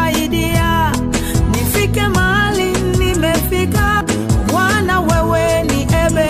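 At 4.01 s there is a CD skip. The laser jumped tracks, muting for a few milliseconds, heard as a tick before the sound resumes elsewhere.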